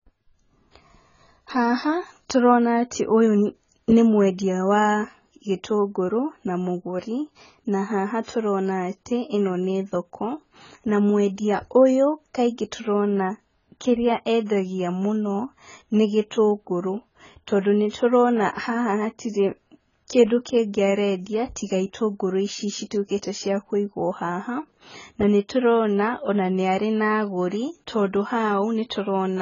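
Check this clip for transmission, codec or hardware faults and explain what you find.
Two faults are audible: heavy codec damage across the whole recording, and one pre-echo on an attack near the 18-second mark.

AAC compression, throughout: the speech sounds dull and smeared, with nothing above 7 kHz and a warbling, fizzy texture on sustained sounds and sibilants. The likely cause is AAC-LC coding at a very low rate, consistent with about 16 kbps. To fit that budget, the encoder lowered its cut-off and quantised the remaining frequency lines so coarsely that bands drop out or shimmer from frame to frame.

Pre-echo, 17.89 to 17.93 s: a short hiss, lasting 42 ms, comes just before a sharp onset, and the attack itself sounds softened. The transform codec spreads its quantisation noise across an entire block. This attack falls late in its block, so noise sized for the loud onset also fills the quiet moment ahead of it, where nothing masks it.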